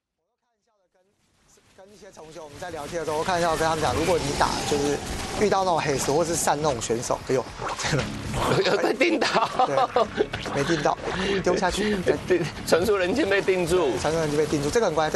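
No technical faults can be heard in this audio. The level rises in a smooth fade from the opening until about 3.38 s, with no step or click along the way.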